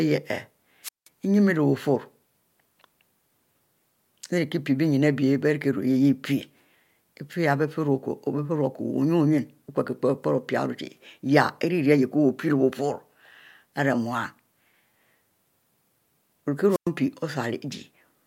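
At 0.83 s the speech suffers a wireless microphone squelch dropout, lasting until 1.08 s. The radio link from the transmitter fades. Hiss rises briefly. Then the receiver's squelch shuts the output, leaving about 180 ms of near silence before the speech returns. The same fault recurs from 16.69 to 16.89 s. This time the muted gap is shorter, about 107 ms.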